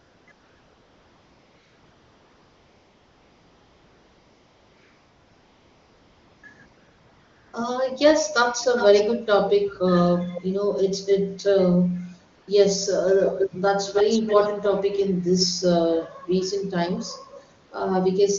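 AMR comfort noise fills the opening and several pauses of this speech recording: 0.00 to 0.27 s, 0.31 to 6.43 s (a stretch of about 6.1 s), 6.65 to 7.53 s, 12.35 to 12.47 s and 17.65 to 17.71 s. In each gap the phone judged the talker silent and sent no speech frames, so the receiver synthesised a smooth, steady hiss from a rough level-and-spectrum sketch instead of passing the real background, and that noise switches in and out at the gap edges.

Echo leak appears as a delayed second copy of the voice, roughly 354 ms behind it at 8.61 to 9.03 s, 9.68 to 9.75 s and 10.33 to 10.42 s, then about 315 ms behind at 13.23 to 13.50 s, 13.93 to 14.66 s and 15.38 to 15.46 s. The copy ranges from about 25 dB down to roughly as loud as the speech itself, strongest near 13.2 s. The likely cause is a far end on loudspeaker whose echo canceller let part of its microphone pickup back into the call. The AMR-WB coding itself sounds clean, which fits one of its higher bitrates.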